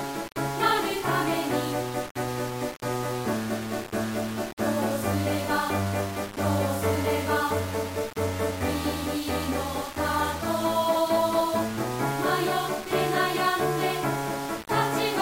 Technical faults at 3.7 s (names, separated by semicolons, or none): low bit depth without dither